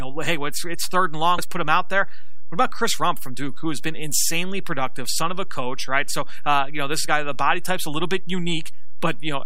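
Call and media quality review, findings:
DC offset, whole clip: constant bias shifts the speech waveform off zero, likely from an uncorrected capture or conversion stage. Not audible as such; it costs headroom on one polarity and shows as steady energy at 0 Hz, the very bottom of the spectrum.

Damaged data in a compressed stream, 1.37 s, between "it's it's third and" and "put him out there": corrupt bytes in the encoded speech make the decoder misread frames, lose sync and resync on the next header. Heard as a brief blip.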